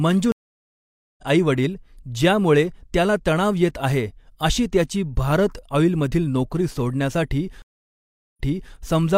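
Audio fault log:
0.32–1.24 s, stream reconnect: the connection dropped and the player restarted its decoder mid-stream, leaving 0.86 s of silence. Audio resumes about half a second further on, at "आई वडील ज्यामुळे त्याला", so a piece of speech is skipped, and the fresh decoder's first frame fades in.
7.62–8.74 s, stream reconnect: another break and decoder restart gives 0.73 s of silence. This time the server resent a burst, so playback resumes 0.38 s earlier and that stretch of speech is heard twice, again with a softened onset.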